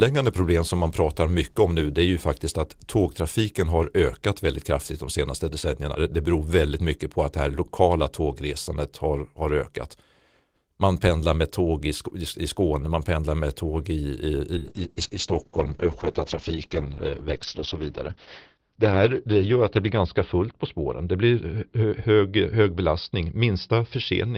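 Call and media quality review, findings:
Call bitrate drop, 14.58 s to end: coarse, dulled speech. Spectrogram shows a hard ceiling at 6 kHz, down from 20 kHz. Opus encoder is starved by a falling bandwidth estimate, which fits 32 to 7 kbps; worst for 3.95 s.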